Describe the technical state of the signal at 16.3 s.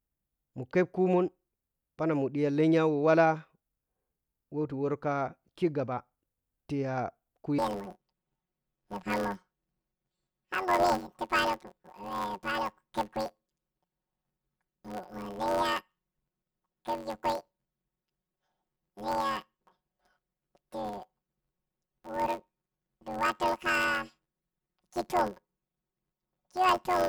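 At 16.3 s the speech has a robotic buzz near 92 Hz with no clear octave shift, from planar audio read as interleaved, running from 7.59 s to the end. Each 10.88 ms block of left-then-right samples is read as alternating pairs, so each block plays twice at double speed, first left and then right.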